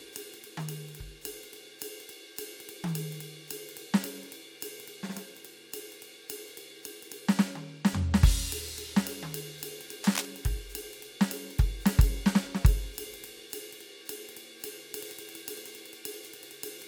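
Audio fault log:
10.03–10.25 s, cable scratch noise: dense, uneven crackling just below the music's level, likely a worn lead or connector moving so its contact resistance fluctuates rapidly.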